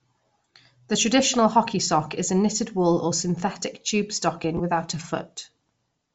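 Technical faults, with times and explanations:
throughout: Bluetooth LC3 compression, likely at a low rate near 32 kbps in 7.5 ms frames, leaves speech breathy and grainy; the spectrogram shows a noise-filled upper band.
4.58–4.61 s: lost LE Audio frames between "or synthetic tube stocking" and "without a"; a roughly 15 ms gap, fitting two dropped frames, is patched with a noisy smear visible as a blurred spectrogram slice.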